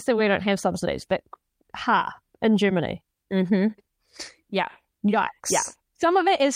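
No technical faults are audible anywhere in the recording.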